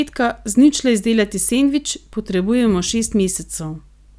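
No technical faults can be heard in this recording.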